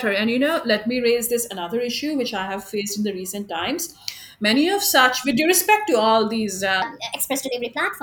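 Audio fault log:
6.82–8.02 s, section at the wrong speed: the final stretch of speech suddenly turns high and hurried. The voice jumps up by about four semitones and the syllables run 1.24 times faster, giving a thin, chipmunk-like quality through to the end. Pitch and tempo rise together by the same ratio, so the tail was likely played back against the wrong clock, running fast rather than being pitch-shifted on its own.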